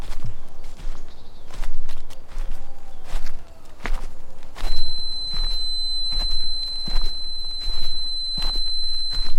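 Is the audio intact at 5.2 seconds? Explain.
No, at 5.2 seconds you're in the middle of a feedback whistle that starts at 4.6 s and keeps going right to the end of the clip. It's a thin, steady tone around 4.1 kHz sitting roughly 10 dB under the main sound, swelling and fading slowly in level. The likely cause is a loudspeaker-to-microphone loop hovering just at the edge of feedback, so that one frequency keeps ringing without ever building into a full howl.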